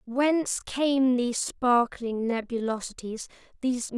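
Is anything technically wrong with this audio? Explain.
Yes. From 0 to 2.8 s there is a time-stretched section: software likely slowed this stretch of speech to about 0.685 times its pace, repeating short pieces to hold the pitch steady, so it drags, then the pace jumps back to normal.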